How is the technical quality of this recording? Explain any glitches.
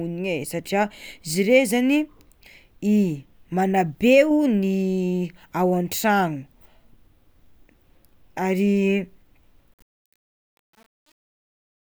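The speech has one clear fault, in its closing seconds. From 9.74 s to the end at 11.93 s there is truncation distortion on the fade-out. The fade stage drops low bits without dither, which fits an 8-bit word. From 9.92 s the fading level falls to a few coarse square steps. It sounds gritty.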